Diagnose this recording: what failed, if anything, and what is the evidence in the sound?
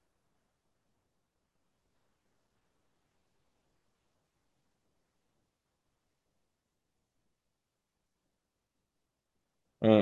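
Nothing failed; no stage shows an audible fault here.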